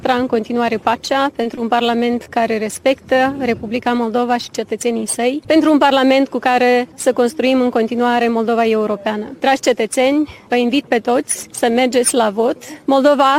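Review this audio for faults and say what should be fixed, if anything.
Short concealed packet loss occurs at 1.43–1.47 s and 1.55–1.59 s. Each time, 20 ms of audio arrived too late, and the decoder extended the preceding sound, causing a brief smear. A larger jitter buffer or forward error correction would prevent this.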